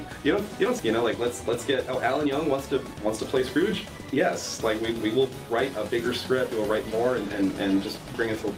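A skip ahead at 0.79 to 0.81 s drops roughly a second of waiting audio, joining both sides almost directly, so the sound lurches forward without a pause.

Jitter buffer speed-up follows at 2.94 to 4.17 s (113%), 4.58 to 5.44 s (111%), 5.91 to 6.59 s (104%) and 7.05 to 8.27 s (106%), where short pitch-period slices are repeatedly removed to shrink an overfull buffer, hurrying the sound at unchanged pitch.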